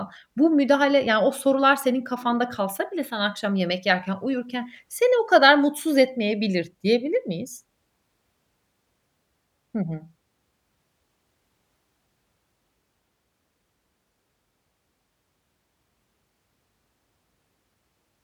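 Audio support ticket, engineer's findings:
No audible fault found in the speech clip. Nothing to flag for follow-up from the listening check.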